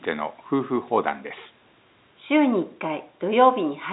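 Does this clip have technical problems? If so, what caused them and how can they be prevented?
No, this clip has no technical problems, so there is nothing to prevent.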